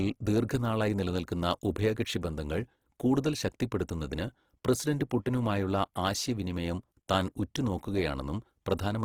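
Speech clip with plainly audible Opus compression throughout: consonants and vowels take on a rough, grainy, noise-filled texture rather than swirling. The full bandwidth up to about 20.4 kHz points to Opus in its CELT music mode, likely at a low rate near 16 kbps.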